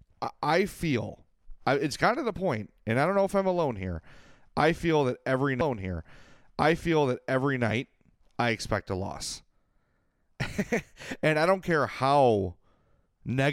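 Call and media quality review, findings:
Stream segment repeated, 5.60 to 7.62 s, just after "I feel that every". About 2.0 s of speech plays twice, with a small blip at the jump back. Probable component: player or segment queue. Same segment fetched or queued twice, adding 2.0 s.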